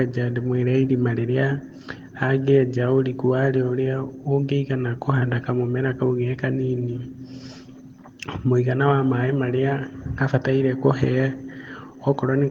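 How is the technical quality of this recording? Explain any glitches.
No glitches turn up anywhere in the recording, so there is nothing to explain. The speech carries light Opus voice compression in its hybrid fullband mode, which fits a rate of around 20 kbps, and the band stays open up to about 20.2 kHz with only a faint coded texture.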